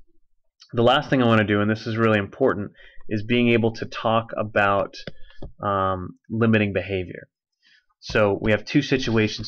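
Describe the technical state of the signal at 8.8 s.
The signal at 8.8 s is intact, with no technical fault present at that point.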